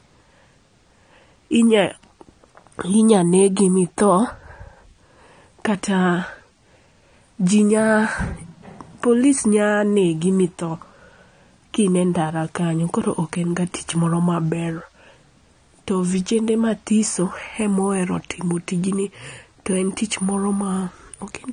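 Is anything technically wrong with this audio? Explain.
Yes. Across the whole speech clip there is audible damage, likely from AAC compression at a low bitrate. The codec codes 1,024 frequency lines per frame at around 32 kbps, so it discards fine detail and removes the top of the spectrum. Nothing remains above 9.6 kHz, leaving the speech dull, with smeared, fizzy sibilants. A spectrogram shows a hard horizontal ceiling at 9.6 kHz, with patchy gaps in the upper bands below it.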